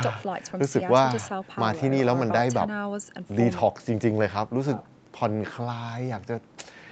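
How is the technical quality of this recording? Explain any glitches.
No glitches or faults heard.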